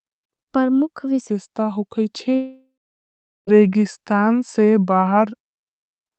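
From 1.30 s to the end, the speech turns deep and slow, running at 0.805 times normal speed with the pitch dropped roughly four semitones. This is a section at the wrong speed, likely from an editor or player timing the audio to the wrong clock.

Inside that stretch, from 2.35 s to 3.49 s, the speech gives way to a fading buzz or hiss, then about 0.77 s of near silence before it resumes with about 1.12 s lost. This long network dropout was likely caused by packets failing to arrive, with the receiver stretching the last sound until nothing remained.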